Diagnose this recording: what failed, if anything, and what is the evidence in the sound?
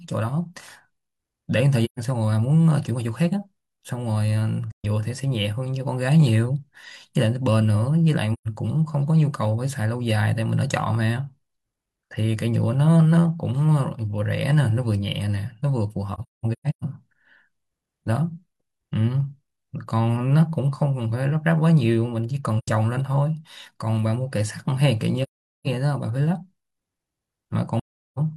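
Soft-edged silent holes break the speech at 1.85–1.99, 4.71–4.85, 8.33–8.48, 16.14–16.84 (scattered gaps, longest around 0.2 s), 22.58–22.68, 25.23–25.67 and 27.79–28.18 s. This is AAC frame loss with muting at the codec stage. Lost frames were decoded as silence, and the overlapping windows fade the sound out and back in.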